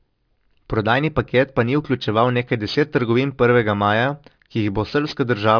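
Sibilants in this speech recording come out gritty and metallic for its whole length, with a hiss that seems to sit at the wrong pitch and a spectrum that stays loud right up to a hard ceiling near 5.5 kHz. That is aliasing. The sample rate was cut without an anti-alias filter, which fits a drop from 48 kHz to 11 kHz. Everything above 5.5 kHz folded back into the band as unrelated tones, roughly 25 dB below the speech.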